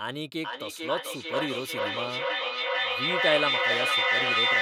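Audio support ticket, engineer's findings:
Feedback echo between two devices, 0.44 s to end of clip. Speech returns roughly every 0.4 s, thinner and ringing, building to about 6 dB above the direct speech instead of decaying. Second device's playback re-entering a microphone whose echo canceller cannot see it.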